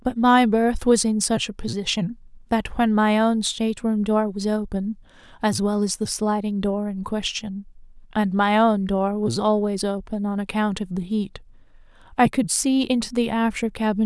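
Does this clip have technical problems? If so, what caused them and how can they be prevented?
No, nothing in this speech clip stands out as a technical problem, so there's nothing here that needs preventing.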